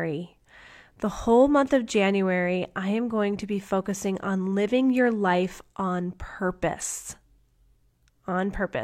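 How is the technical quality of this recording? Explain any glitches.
No technical faults are audible.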